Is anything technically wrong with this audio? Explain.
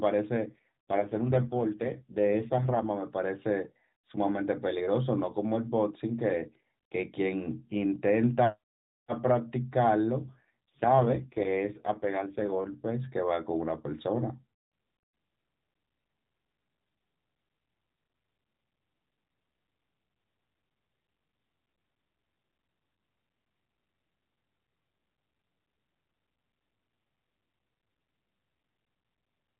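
Yes. There are two AMR rate drops, from 0.38 to 2.86 s and from 10.20 to 12.76 s. On a weak radio link the network switches the AMR-NB codec to a lower rate and spends the freed bits on error protection, and the roughness here fits a fall from 12.2 to 4.75 kbps. The band stays cut at 4 kHz and nothing drops out, but the speech turns buzzy and synthetic, then clears when the rate recovers.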